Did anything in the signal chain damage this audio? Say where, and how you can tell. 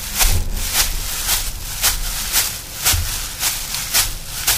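No, nothing in the audio stood out on listening as a sign of damage from any stage of the signal chain.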